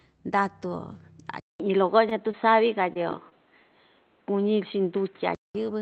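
Speech that abruptly turns dull and boxy at 1.4 s, after a silence of about 200 ms, and stays that way until 5.55 s, with nothing above 4.1 kHz, a level shift of around 5 dB and new background noise well below the voice. The likely cause is an input switched to a poorer device, such as another microphone or a headset's call profile. Between 2.09 and 2.28 s a sound is briefly held too long, a short stall from a late packet: the jitter buffer ran dry and the receiver stretched the last sound by about 17 ms before resuming where it left off. Brief smears or wobbles at 2.31–2.35 s, 2.93–3.12 s and 3.29–3.33 s are short concealed packet losses, each about 20 ms of audio that never arrived and was patched by extending the preceding sound.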